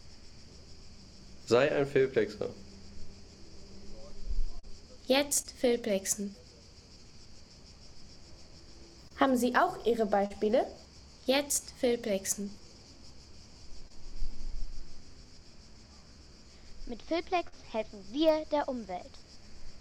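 Short concealed packet loss occurs seven times, at 4.59, 5.43, 6.32, 9.08, 10.26, 13.88 and 17.48 s. In each case 20 or 40 ms of audio arrived too late to decode. The receiver bridged the gap by extending the preceding sound and then crossfading back into real audio. Each gap is heard as a brief smear or wobble. At 6.32 s the patch also stretches timing slightly, by roughly 15 ms.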